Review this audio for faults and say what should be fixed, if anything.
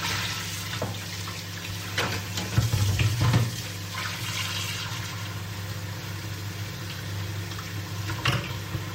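Nothing here needs fixing; the sound comes across without any technical faults, so it can stay as it is.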